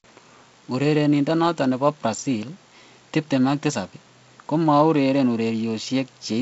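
Nothing goes wrong anywhere in this speech, which comes across as ordinary G.722 wideband telephone audio at 48 kbit/s, with the top end rolling off around 7.7 kHz and the slight extra graininess that this lower bitrate brings to the band under 4 kHz.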